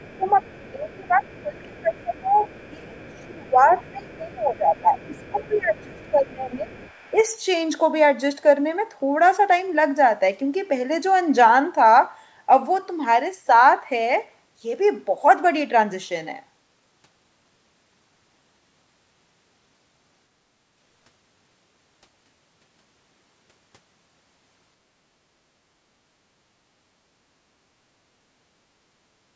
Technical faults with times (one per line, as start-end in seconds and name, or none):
0.00-7.23 other side's voice leaking through
0.17-6.71 speech suppressed in double talk
7.12-7.31 speech suppressed in double talk